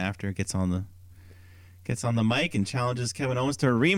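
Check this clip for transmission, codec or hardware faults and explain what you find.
There's one fault here, a channel delay causing comb filtering, from about 1.92 s to 3.63 s. One side of the stereo pair arrives around 10 ms behind the other, and once the two are folded to mono, the shared content cancels at regularly spaced frequencies, with the first notch somewhere near 50 Hz and more following every 100 Hz or so. The speech takes on a hollow, phasey quality for that stretch.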